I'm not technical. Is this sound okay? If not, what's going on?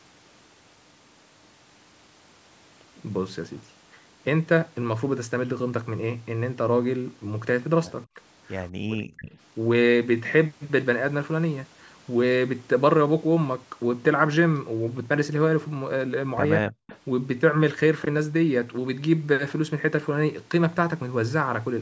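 No, not quite. There are two problems, both typical of a call where someone is on speakerphone.

The first is speech suppressed in double talk. At about 8.15 to 8.2 s there's a tiny dip, then from 8.81 to 9.3 s the voice drops away almost completely, and again from 16.59 to 16.74 s it sinks sharply. This is likely the call's echo canceller getting confused when both people talked at once, so it turned the voice down along with the echo it was trying to remove.

The second is echo leak. Right at 9.26 to 9.3 s, and again from 16.87 to 16.98 s, there's a faint delayed copy of the voice trailing about 0.2 s behind. The second one is a bit easier to notice. That's likely the speakerphone's own microphone picking up what it played and sending a scrap of it back down the line.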